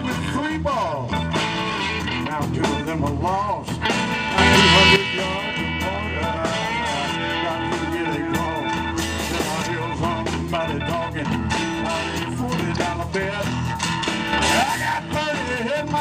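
At 4.38 to 4.96 s and 14.33 to 14.63 s there's a sudden gain jump, about 11 dB then about 6 dB, sound and noise together, likely an unramped gain step.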